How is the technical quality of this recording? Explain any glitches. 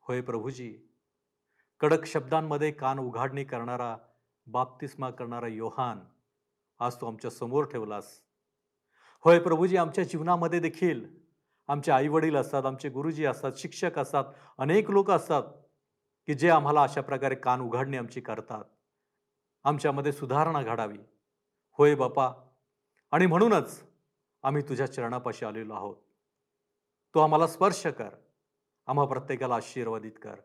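No glitches or technical faults are audible anywhere in the recording.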